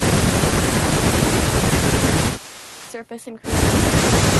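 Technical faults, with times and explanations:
0.51–0.86 s, 1.27–1.38 s and 1.99–2.81 s, speech suppressed in double talk: the speech dips by up to about 15 dB, likely an echo canceller turning down both talkers when both sides spoke at once.
2.34–2.93 s, echo leak: a faint copy of the speech returns 397 ms late, about 20 dB down, likely loudspeaker pickup that the far end's echo canceller failed to remove.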